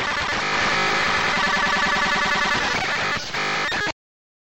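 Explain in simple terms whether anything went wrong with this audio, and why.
Yes, something went wrong. From about 0.53 to 2.77 seconds you hear a doubled audio track: the same sound plays twice, with a second copy trailing roughly a third of a second behind and about as loud as the original. It isn't an echo, since it has no fade or room character, and it cuts in and out abruptly. The likely cause is the audio being picked up a second time through a slower path.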